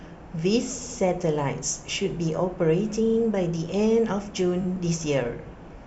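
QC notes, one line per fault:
0.81–0.97 s, repeated frames: an 80 ms stretch of speech plays three times in a row, giving a stuttering echo. The decoder was fed the same compressed block repeatedly, which fits four 20 ms frames.
3.05–3.17 s, repeated frames: a 40 ms slice loops four times, a faster stutter.
4.61–4.65 s, repeated frames: a single 20 ms fragment sounds three times, a brief rattle.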